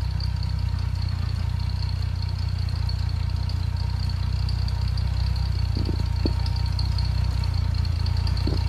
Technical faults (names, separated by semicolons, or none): none